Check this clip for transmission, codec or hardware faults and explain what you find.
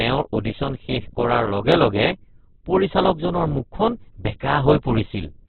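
One fault runs through the whole clip: heavy Opus compression. The encoder, likely starved of bits, points to about 8 kbps in music (CELT) mode at narrowband. It fills unaffordable bands with folded or noise content, leaving the speech muffled, rough and grainy.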